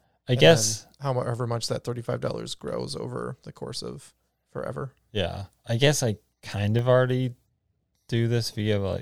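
At 6.79 s the speech drops to a block of digital silence lasting about 0.73 ms, a span that points to a 32-sample chunk of output being replaced by zeros, most likely because the buffer was not filled in time. The signal jumps straight to zero and back without any fade, so both edges produce a discontinuity. With a gap this short, no hole can be heard; it comes across as a tick or dip.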